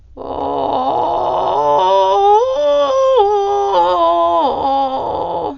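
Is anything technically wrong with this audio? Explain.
Yes, this music sounds heavily coded throughout, likely from Dolby Digital compression at a very low bitrate, around 48 kbps. The encoder starved the spectrum: nothing above 6.9 kHz, noise-filled gaps, so it's dull with rough, fluttering noise around tones.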